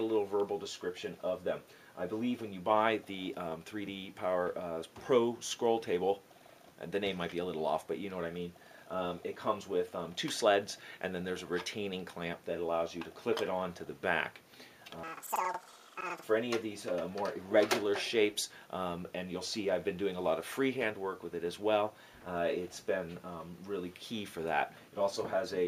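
From 15.03 to 16.30 s there's a stretch of planar audio read as interleaved. Each block of about 93 ms, which fits a 4096-sample block, plays twice at double speed, so the sound jumps an octave up and flutters at about 10.8 Hz.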